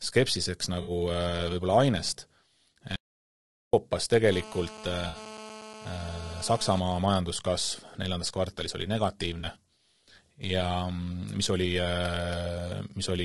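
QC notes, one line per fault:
Throughout: low-delay AAC compression. The speech is rough and grainy, with noise filling the gaps between harmonics and a thin, synthetic-sounding top band. That points likely to AAC-ELD at around 32 kbps, whose short frames resolve pitch poorly. Unlike frame loss, it never lets up.
0.81–0.91 s, 5.07–5.17 s, 9.39–9.45 s: AAC frame loss with concealment. Brief smeared, phasey patches of about 60 ms, 60 ms and 40 ms, the last just after "neljandas kvartalis oli". The decoder patched the missing frames from the previous spectrum, so sound continues instead of going silent.
2.96–3.73 s: audio dropout to silence. The speech cuts off abruptly and returns mid-flow after about 0.77 s of silence with no room tone. It is likely an input that was lost while silence kept being written, not concealment, which would leave smeared sound behind.
4.32–6.80 s: GSM phone buzz. 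A hard, raspy buzz at 217 Hz, rich in harmonics, sits about 16 dB below the speech and stays steady, as during a call. It comes from rectified radio bursts and has nothing to do with the speech, unlike codec grain.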